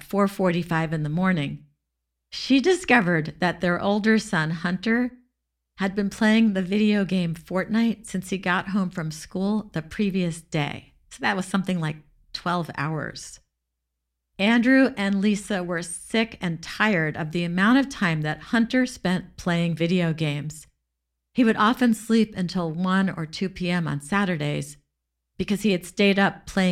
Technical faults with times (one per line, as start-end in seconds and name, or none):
none